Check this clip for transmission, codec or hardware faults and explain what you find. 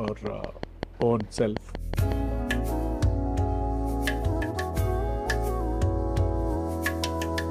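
One hardware-type fault is present. From 0.08 s to 2.13 s a train of clicks ticks regularly at 5.4 per second, about ten in all, each spiking well above the sound, and likely caused by interference or a struggling interface injecting identical pulses. On a waveform they appear as evenly spaced sharp spikes, and on a spectrogram as thin vertical lines spanning the full frequency range.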